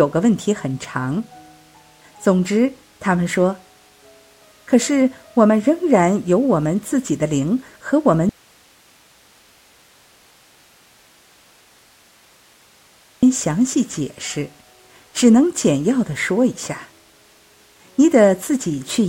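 At 8.29 s the sound cuts out abruptly and stays gone until 13.23 s, a gap of about 4.9 s. This is an audio dropout to a faint residue: only a low hiss remains, roughly 35 dB below the normal level. The wanted signal was likely lost upstream while the path after the break stayed live. The drop and the return are both sudden, not a fade or a natural pause.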